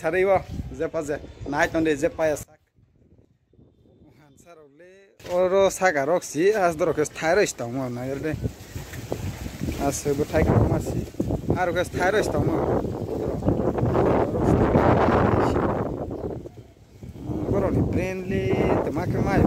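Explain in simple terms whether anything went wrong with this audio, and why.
From 2.43 to 5.20 seconds, the sound suddenly drops away and turns faint. This is most likely one channel inverted. One stereo side is flipped upside down. When both sides are combined, the shared sound cancels out, leaving only a weak trace.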